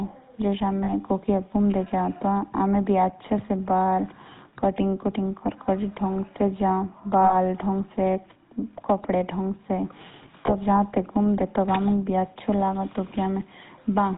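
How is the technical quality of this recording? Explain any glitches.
The recording is speech carried over a heavily coded phone-type channel, with three brief dropouts.

GSM full-rate codec, throughout: the sound was coded by the original GSM speech codec, and the quality fits its roughly 13 kbps rate. It models the vocal tract as a filter and drives it with a sparse train of regularly spaced pulses, discarding most of the excitation detail and everything above 4 kHz. The damage is plainly audible as a dull, band-limited tone with a buzzy, gravelly roughness running through the voice.

Lost GSM frames, at 0.84–0.90 s, 7.24–7.35 s and 10.46–10.52 s: at each point the decoder lost one or more frames and covered the gap by reusing the last good frame's settings. The three losses fit roughly 40 ms, 60 ms and 20 ms of missing signal. Each is heard as a short, smeared, metallic ringing where the sound briefly sticks on one rough timbre instead of moving on.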